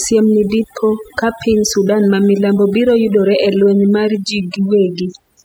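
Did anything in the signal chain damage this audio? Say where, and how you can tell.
Yes: overdone noise removal at the call-processing stage, throughout; the spectrogram shows isolated bins blinking between syllables, and pauses hold twinkling specks.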